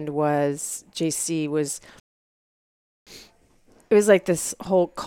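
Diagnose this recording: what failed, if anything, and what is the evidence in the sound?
A rebuffering stall hits the playback stage at 2.00 s. The speech cuts to silence until 3.07 s, then resumes exactly where it stopped, with nothing missing. The player drained its downloaded audio and waited for more data to arrive, adding about 1.07 s of dead time.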